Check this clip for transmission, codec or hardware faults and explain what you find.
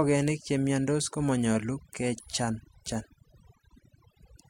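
The speech shows one processing fault, present for the whole clip: overdone noise removal. The noise reducer is set too aggressively, cutting individual frequency bands that sit near its noise estimate, which also takes out quieter speech detail. In pauses the background drops and breaks up into twinkling specks.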